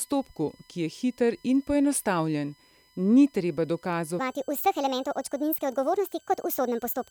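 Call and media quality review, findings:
USB whine, whole clip: steady 1 kHz tone with harmonics, strongest around 5 kHz, sitting about 35 dB under the speech. Probably the USB interface's 1 ms frame activity getting into power or ground and leaking into the audio path.

Section at the wrong speed, 4.19 s to the end: speech suddenly runs 1.54 times fast, pitched up about seven semitones, so it sounds high and rushed. Likely a player or editor resampling that stretch against the wrong clock.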